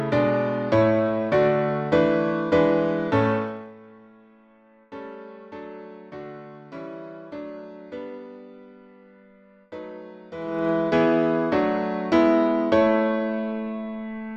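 A rapid ticking, like a zip being drawn, rides on the sound from 3.35 to 3.74 s as the level falls by around 15 dB, and again from 10.35 to 10.7 s as it rises by about the same amount. This is zipper noise: the gain moves in unsmoothed 1 dB steps, roughly 40 and 50 times a second respectively, and each jump leaves a small click that together forms the zipping texture.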